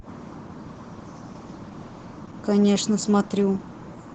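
Opus voice compression colours the speech from start to finish. The codec runs in its speech-oriented SILK mode. The band stops near 8 kHz, so the top end is missing. Coarse excitation coding makes the voice hoarse and faintly robotic, which fits a low bitrate around 12 kbps.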